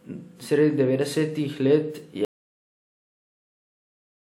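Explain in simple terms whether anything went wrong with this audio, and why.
Yes: an audio dropout to silence. After "devetdesetih let", at 2.25 s, the speech cuts to total silence until the end, likely from lost input.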